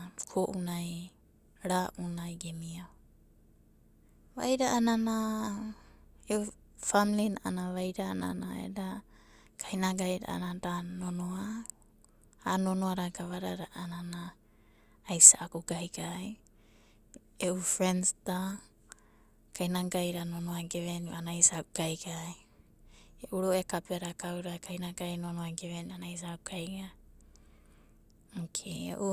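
Nothing in this speech recording trips the ear as a technical fault, so there's no problem to point to anywhere along it.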